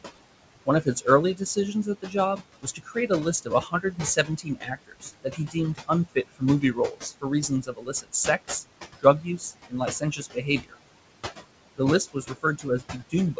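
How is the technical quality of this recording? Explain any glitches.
The recording's quality is limited by an overactive noise suppressor, which leaves audible artifacts and also removes parts of the speech.

Noise suppressor artifacts run throughout the clip. The room noise, about 12 dB under the speech, is pushed down by about 20 dB in the gaps, so it pumps. On a spectrogram the noise floor appears as flickering patches.

Speech cut by the noise suppressor happens at 0.65–3.1 s, 3.42–8.64 s, 9.0–10.78 s and from 12.13 s to the end. Quiet syllables are treated as noise and dropped by about 16–22 dB, so they sound swallowed. In the waveform they show as abrupt dips in the envelope.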